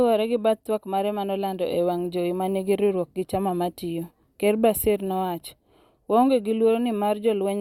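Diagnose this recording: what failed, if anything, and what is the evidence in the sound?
Nothing failed in this recording.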